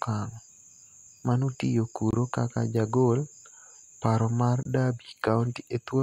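At 2.11 and 4.63 s, a gap between chunks leaves 23 ms silences every 2.5 s. Unlike a dropout, no speech is lost, only delayed.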